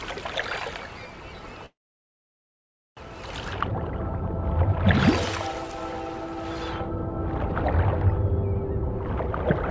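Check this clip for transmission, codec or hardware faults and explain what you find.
One transmission fault is present: a call audio freeze from 1.66 s to 2.99 s. The sound stops, the last instant is carried on briefly as a fading tail, and about 1.2 s of near-silence follows before playback resumes exactly where it left off. This is likely jitter-buffer underrun from packets held up in transit. Nothing is lost, but everything after the freeze arrives about 1.3 s late. The band-limit at 8 kHz fits the G.722 call path.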